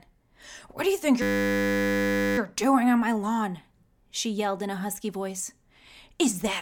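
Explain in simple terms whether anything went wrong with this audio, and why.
A system hang loop occurs from 1.22 to 2.38 s, just after "do you think". The computer briefly froze while the sound hardware kept replaying one tiny 10 ms slice over a hundred times, producing a steady 100 Hz buzz until "doing on my lawn" resumes.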